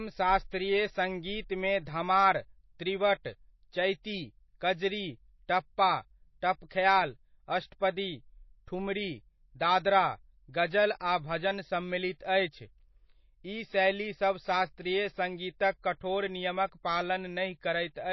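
Throughout, the speech sounds watery and swirly and stops dead above 5.8 kHz, likely MP3 compression starved of bits, which fits a 24 kbps bitrate.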